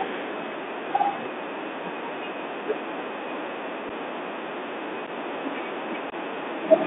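From start to finish the speech runs through a Bluetooth CVSD headset codec, and the damage is easy to hear. The band is squeezed to roughly 250 Hz to 3.6 kHz, so everything above that is simply gone, consistent with a 64 kbit/s CVSD link. CVSD sends a single up-or-down bit per sample with an adapting step size, which leaves a grainy hiss under the speech and roughens the louder, brighter moments where the step can't keep up.

On top of that there's unconcealed Bluetooth headset packet loss. At 3.89 s and again at 5.07 s, about 7.5 ms of audio drops out, each time sounding like a couple of lost packets. A longer hole of about 18.8 ms follows from 6.10 to 6.14 s, more like five packets' worth. Nothing fills those gaps, so the sound just stops and restarts with hard edges, and it comes back briefly quieter as the CVSD decoder's step size recovers.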